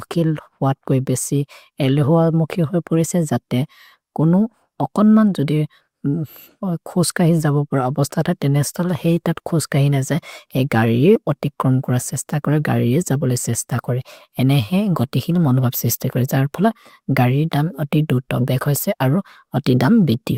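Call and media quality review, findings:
Compressed frames skipped at 11.15–11.17 s, after "तत् खोस्कहिन् अजए", before "अति क्रोन् कोर". Again at 18.61–18.64 s, after "दुध् दोघ्". Decoder dropped frames, fits 20 ms frames. Jumps of roughly 40 ms, then 20 ms.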